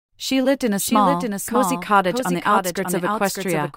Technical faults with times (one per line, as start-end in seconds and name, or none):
0.00-3.76 doubled audio track